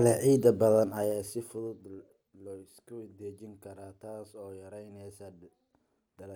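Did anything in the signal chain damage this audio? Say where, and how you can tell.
Yes. Just after "leh ciid", from 0.74 s to 2.04 s, a level drop of roughly 20 dB is applied in 1 dB steps at around ten a second. Each jump leaves a small click, so a ticking zipper noise rides on the speech while the level falls. That points to a gain stage in the processing or buffer path that updates once per block with no ramp. A fader-style smooth level change glides without those ticks.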